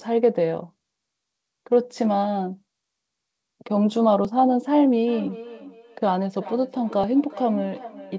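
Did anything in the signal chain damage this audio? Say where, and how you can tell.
Yes. At the driver or buffer stage, samples were likely overwritten before the program collected them, a dropped buffer (overrun). A small jump in the speech at 4.25, 5.27 and 7.04 s each loses only a few milliseconds, with no gap of silence.

In call processing, feedback echo between two devices begins at 5.07 s and runs to the end. A second device's microphone picks up the first device's playback and sends it back, so speech returns roughly every 400 ms, peaking about 15 dB below the direct voice, thinner each pass.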